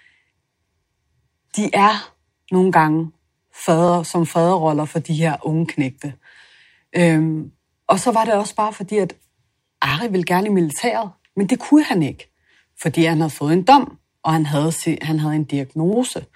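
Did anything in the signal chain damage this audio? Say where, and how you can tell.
Yes, there are overlapping chunks from a buffering or chunked-processing stage. Right after "han havde han havde", from 15.93 to 15.95 s, about 23 ms of the speech plays twice, heard as a brief stutter. The chunk boundary falls at a 6.0 s spacing, and the next chunk started before the previous one ended. On a waveform, a short stretch repeats with a step discontinuity at the splice. A spectrogram shows a thin vertical broadband line there.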